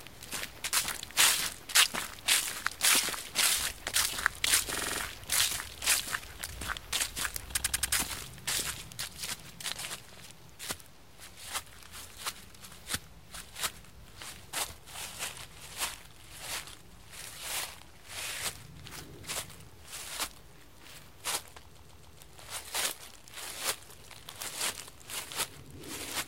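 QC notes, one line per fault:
4.73–5.00 s, 7.56–7.93 s, 10.14–10.18 s, 21.77–22.19 s, repeated frames: short chunks of the encoded stream replay, so the sound stutters. Loops are 46 ms (first and third), 93 ms and 139 ms, repeating up to six times and stretching the audio by 0.05–0.42 s.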